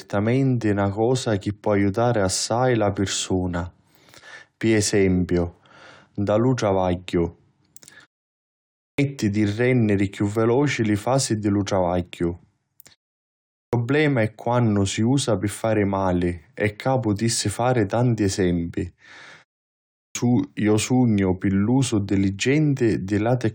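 At 8.63 s, 13.41 s and 19.84 s, speech lurches in after short pauses with roughly 0.3 s missing, the clipped start after a pause before "di renniri chiù veloci" and "è quannu si usa": the sleeping output device wakes too slowly.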